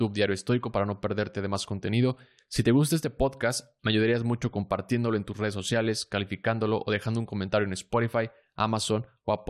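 No faults turn up anywhere in this recording; nothing breaks, drops out or glitches along the way.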